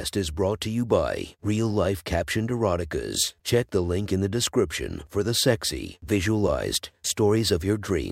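No technical faults are audible.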